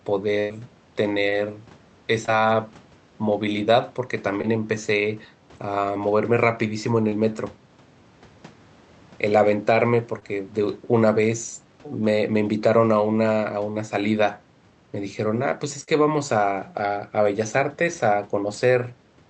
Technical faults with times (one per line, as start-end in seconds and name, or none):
0.39-0.52 burst of packet loss
1.30-1.34 short concealed packet loss
2.26-2.30 short concealed packet loss
4.42-4.45 short concealed packet loss
7.09-7.13 short concealed packet loss
10.19-10.23 short concealed packet loss
15.83-15.89 short concealed packet loss